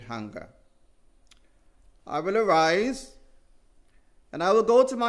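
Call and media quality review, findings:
Nothing stood out on listening to this recording.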